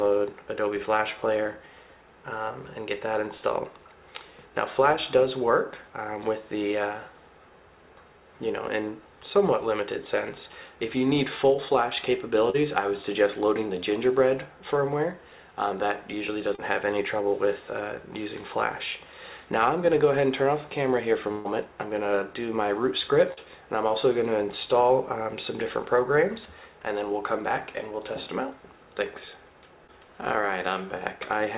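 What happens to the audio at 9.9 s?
Nothing goes wrong at 9.9 s: the audio is intact there and passes through the call path with its narrowband sound, with nothing above 4 kHz, as a G.711 mu-law link at 64 kbps would give.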